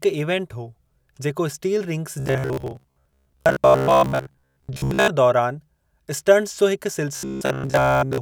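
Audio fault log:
2.2–5.08 s (ending just before "दौरान स्टंटस जो हिकु") and 7.16–8.21 s (starting right after it): robotic sound from repeated short buffers. The speech becomes a rigid metallic buzz at 66.7 Hz, likely from a 15 ms block being replayed over most of the audio. The spectrogram shows evenly spaced horizontal harmonic stripes, and the waveform shows identical repeating cycles.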